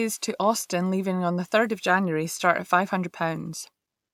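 Nothing in the speech stood out as a technical problem on listening.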